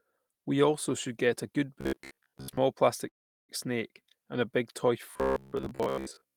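From 1.81 to 2.57 s, just after "should get a good", new audio likely arrived too seldom, so a short buffer of about 15 ms was replayed in place of most of the incoming speech. This is robotic sound from repeated short buffers: a rigid, metallic buzz near 67 Hz that loosely tracks the speech.

Between 3.08 and 3.50 s, delayed packets likely drained the jitter buffer, causing a call audio freeze. The sound stalls into about 390 ms of silence, then resumes at "snake and a big" with nothing lost but the timing pushed back by about 0.4 s.

From 5.11 s to the end, after "and a big toy", the same likely starved playback returns as the identical robotic buzz near 67 Hz.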